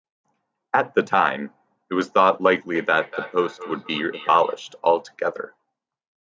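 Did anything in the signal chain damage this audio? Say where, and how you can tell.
Yes: feedback echo between two devices, 2.75 to 4.65 s, the sound returning about every third of a second at about 16 dB below the speech. A second device in the room replays the call into the microphone, and the echo canceller cannot remove sound it did not play.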